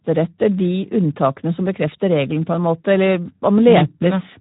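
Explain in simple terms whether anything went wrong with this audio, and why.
Yes: the speech has Speex codec damage throughout. It sounds hoarse and grainy, as if the voice were rebuilt from too little detail. Nothing above about 3.8 kHz remains. A plain telephone-style filter would sound muffled but still clean, while this sounds rough.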